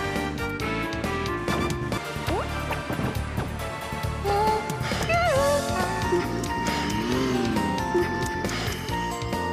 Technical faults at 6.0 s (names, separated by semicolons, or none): none